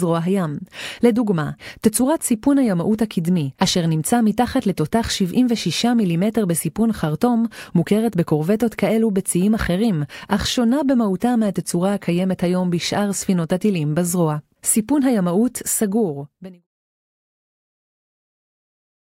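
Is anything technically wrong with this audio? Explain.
No, nothing here is technically wrong.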